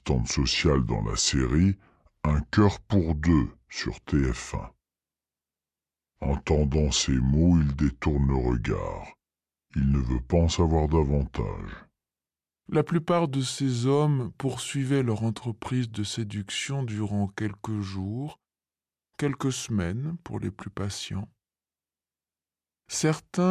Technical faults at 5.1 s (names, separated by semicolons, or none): wrong sample rate